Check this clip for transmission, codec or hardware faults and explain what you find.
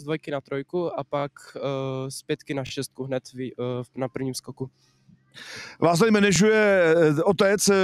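Three kinds of fault are present: a speech-oriented noise suppressor running on non-speech material, two passages where that suppressor cuts the sound hard, and three repeated-buffer stutters.

Noise suppressor applied to music or sounds, throughout: the suppressor is tuned to keep speech and remove everything else, so it treats sustained tones, ambience and decay as noise. Its gain moves over a range of around 10 dB. Onsets pass at near full level while held portions and tails are pulled down, which makes the level pump and the sound thin out between attacks.

Sound cut by the noise suppressor, 0.19 to 0.72 s and 4.41 to 5.38 s: in these two spans the suppressor's gain drops much further than its usual swing. The first reaches about 17 dB down and affects roughly a fifth of a second of audio. The second goes to about 18 dB down and covers around 0.7 s. Steady and fading material sinks or has its decay cut off early, while sharper transients come through largely intact.

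Repeated buffer, 1.20 to 1.24 s, 2.67 to 2.71 s and 6.36 to 6.38 s: fresh audio reached the output late, so the device replayed its last 21.33 ms block, which fits a 1024-sample buffer. The block plays two extra times at the first two points and once at the third. No audio is dropped. Each repeat is heard as a short stutter with a hard join.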